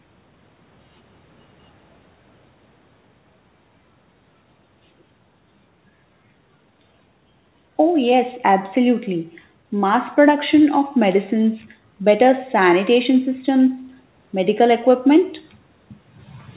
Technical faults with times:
none

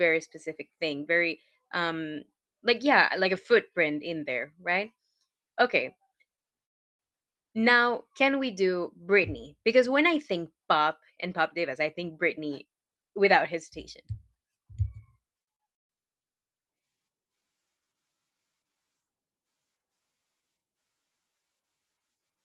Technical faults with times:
6.35-6.40 short stall from a late packet
6.64-7.01 call audio freeze
11.80-14.99 jitter buffer speed-up
15.42-15.91 repeated stalls (stutter)

